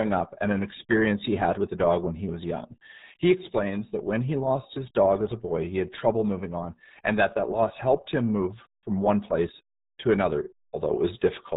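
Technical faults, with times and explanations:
Throughout: RealAudio 14.4 codec. Nothing above 3.8 kHz survives, so speech sounds muffled and gargly. The heavy damage fits an 8 kbit/s dial-up codec.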